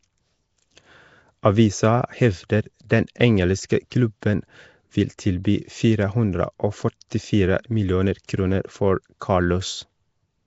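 Across the whole speech clip there is a rough, hissy halo around the voice and a smeared, underwater colouring, with nothing above 7.7 kHz. This points to Nellymoser compression as the likely cause. That codec spends a fixed, small number of bits on each short block of samples, so weak bands get nothing and are filled with substitute noise. The plainly audible damage fits a rate of about 32 kbps.

At 3.90 s and again at 9.20 s, a brief hiss arrives just ahead of a sharp onset, and the attack itself sounds soft and blurred. This is pre-echo, spread over about 16 ms each time. The transform coder distributes its quantisation noise evenly across a block. When a strong transient lands late in that block, noise sized for the loud part also fills the quiet stretch before it.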